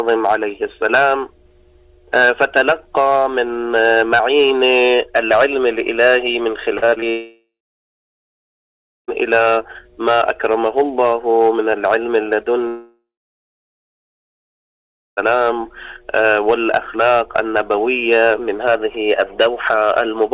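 Audio carried over a narrowband call link, with nothing above 4 kHz, consistent with G.711 A-law, turns choppy and robotic from 6.78 to 7.04 s. Five short holes, the longest 38 ms, are each bridged by stretching the preceding sound, so nearly half of that quarter-second is synthetic fill. This is repeated packet loss (robotic sound): packets went missing or arrived too late again and again, and the receiver's concealment kept looping the last fragment to cover each gap.

Right after, at 7.10 s, the sound gives way to a brief buzz or hiss continuing the last sound that fades into silence, lasting about 1.6 s before audio resumes at 9.10 s. The same happens from 12.68 to 15.19 s, with roughly 2.1 s of that stretch silent. Almost nothing from either interval is ever played back. Both are long network dropouts, likely caused by the stream stalling entirely, so the concealer could only extend the last sound briefly before giving up.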